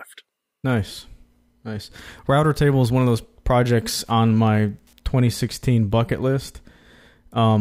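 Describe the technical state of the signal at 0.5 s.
At 0.5 s the speech signal is intact, with no audible technical fault at that moment.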